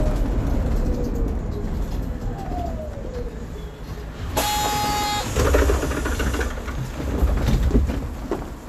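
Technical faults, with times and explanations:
No technical faults can be heard anywhere in this audio.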